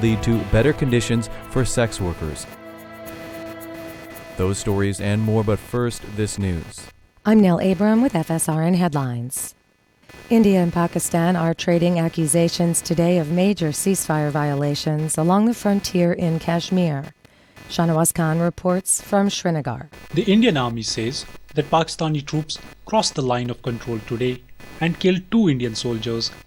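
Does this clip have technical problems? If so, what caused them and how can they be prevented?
Yes, there's computer activity noise running the whole way through: a buzzy, chirping pattern pulsing at around 300 Hz, sitting roughly 25 dB under the sound, caused by processor or graphics load shifting the shared ground. Prevent it with a ground-isolated or external USB interface.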